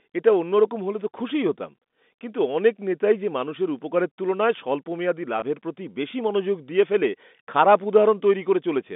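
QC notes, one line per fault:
5.40–5.42 s, packet loss with pitch repetition: about 20 ms of audio drops out, which fits a single lost packet, and the receiver fills the gap by repeating the last pitch period, so the sound briefly holds with a slightly buzzy quality before the band-limited telephone audio resumes.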